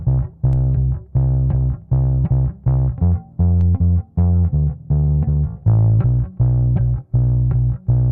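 A DC step occurred twice, at 0.53 s and 3.61 s: the waveform's zero line jumped by about -24 dBFS, then drained away through a 2 Hz high-pass. Each jump is heard as a low thump or click, while the audio itself continues unchanged.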